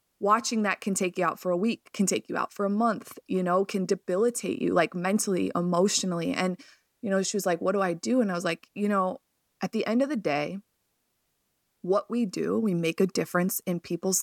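The speech recording has no audible technical faults, and nothing in the signal points to a problem in capture, processing or transmission.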